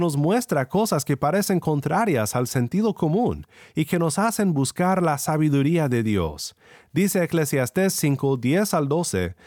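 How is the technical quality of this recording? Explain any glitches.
No glitches or technical faults are audible anywhere in the speech recording.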